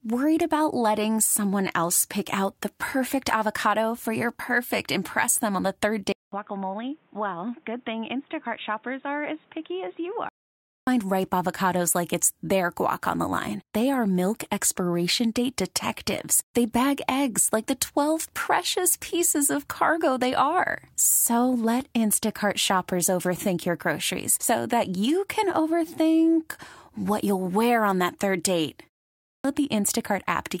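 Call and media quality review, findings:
Dull, band-limited audio 6.12–10.49 s after "them on the third": 200 ms gap, nothing above 3.8 kHz, about 5 dB quieter, new noise floor about 30 dB down. Likely input switched to a poorer device.

Onsets cut after short pauses: 262 ms lost at 10.61 s before "ripe avocados like it's", 285 ms at 29.16 s after "on that third date". Clipped start after a pause: output device waking late.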